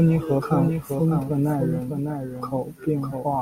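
A doubled audio track runs through the whole clip: a second full-band copy of the speech trails about 0.7 seconds behind, roughly 5 dB quieter, with no decay or room colour. It is likely a second capture path or misaligned edit layering two copies.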